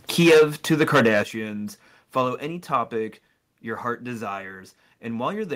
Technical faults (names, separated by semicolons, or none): microphone overload; microphone volume stepped down